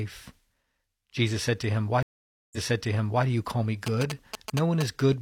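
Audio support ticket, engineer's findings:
Dropout 2.03–3.25 s: speech stops for 0.5 s, then resumes 0.73 s earlier at "do you call me". Stream reconnect: decoder restarted mid-stream; server resent buffered audio.

Galloping dit-dit-dit of short buzzes at 217 Hz, 3.87–4.83 s, after "do you call me", about 5 dB under speech. GSM signalling bursts from a nearby phone, rectified in the audio circuit.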